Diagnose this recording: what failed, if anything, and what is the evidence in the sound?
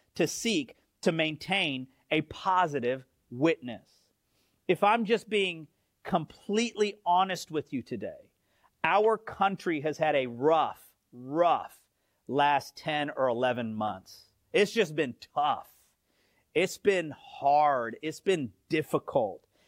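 Nothing failed here that I can hear: the speech comes through with no dropouts, glitches or other damage at any stage, so there's no fault to diagnose.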